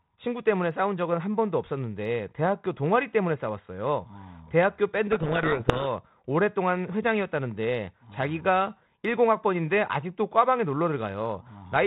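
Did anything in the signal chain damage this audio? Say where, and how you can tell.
Yes, at the codec stage there's a codec payload misread from 5.12 to 5.87 s: the speech suddenly drowns in harsh distortion, then clears. The decoder was reading the G.726 code words with their bits in the wrong order, so the 32 kbit/s ADPCM stream, with the 4 kHz band-limiting still audible, decoded into rubbish.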